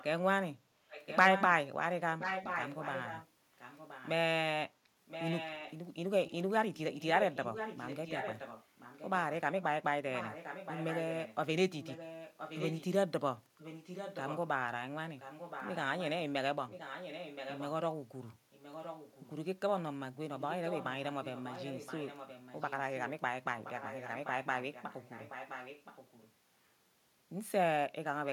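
From 0 to 4.1 s, 5.06 to 19.3 s and 20.39 to 26.32 s, a second copy of the speech trails the original by 1.02 s. This is an echo leak, likely from a loudspeaker at the far end whose echo canceller let part of its microphone pickup back into the call. The echo starts only about 5 dB below the speech, then drops to about 10 dB and finally about 15 dB below. On a spectrogram, each syllable's harmonic pattern repeats 1.02 s later and fainter. The waveform shows matching ghost envelopes filling the pauses.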